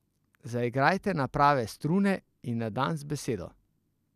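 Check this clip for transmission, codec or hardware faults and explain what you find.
Nothing wrong turns up anywhere in this speech recording.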